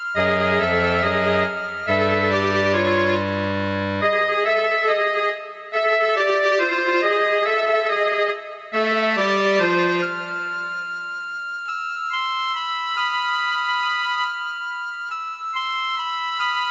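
No technical faults can be heard; the audio has come through a call path whose band stops at 7 kHz, which fits the wideband G.722 codec at 64 kbps.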